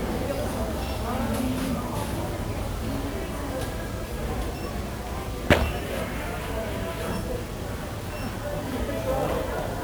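Throughout, 1-bit DFPWM compression buries the sound in fuzzy, crackly hiss, consistent with a 48 kbps stream, smearing broadband noise across the spectrogram and hiding treble detail.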